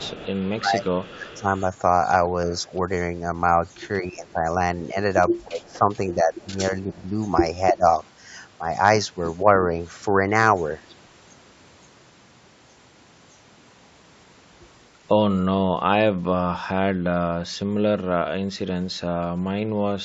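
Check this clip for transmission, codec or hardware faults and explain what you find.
Two recurring faults point to a speakerphone call where both ends talked over each other.

Speech suppressed in double talk occurs from 0.0 to 1.46 s and from 5.47 to 7.84 s. The speech dips in pieces, about half a second in total in the first stretch and most of a second in the second. The deepest drops are about 15 dB and about 20 dB. This is likely the echo canceller failing to tell the near talker from loudspeaker echo while the far side spoke, and attenuating everything.

Echo leak appears from 0.0 to 1.61 s, 3.84 to 4.34 s and 5.65 to 7.02 s. It is a faint copy of the speech trailing 305 ms behind, about 20 dB below the speech at first, then about 25 dB and about 35 dB down. The remote loudspeaker's sound likely reached its microphone and slipped past that end's canceller. It was then sent back as a delayed ghost, against a band-limited call signal with nothing above 8 kHz.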